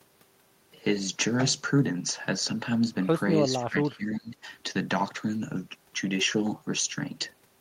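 From 3.51 to 4.36 s the speech drops away sharply, bottoming out at roughly 20 dB down and staying pulled back for most of that stretch before recovering. That's speech suppressed in double talk, and the likely cause is an echo canceller that couldn't tell the near talker apart from loudspeaker echo while both sides were talking, so it clamped down on everything. You hear the talker sink under and then snap back.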